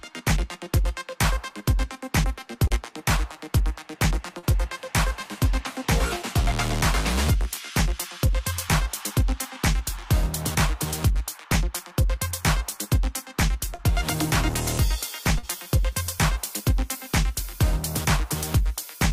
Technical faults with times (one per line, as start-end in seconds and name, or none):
2.67-2.73 short concealed packet loss
4.39-4.46 short concealed packet loss
13.75-13.81 short concealed packet loss
15.38-15.46 short concealed packet loss